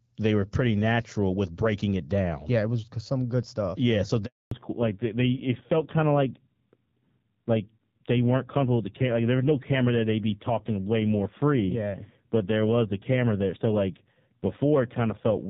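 At 4.25 s the speech cuts out for about 260 ms, until 4.51 s. That's a handover gap: the call hopped between networks and no speech frames came through during the switch, so the sound fades fast into dead silence and whatever was said in there is gone.

Right when it comes back at 4.51 s, you get a fallback to narrowband that lasts to the end. Before the gap the HD Voice sound was clear, with just light codec coloring, but now nothing above 4 kHz survives. It's dull and rougher, which points to a low-rate narrowband codec.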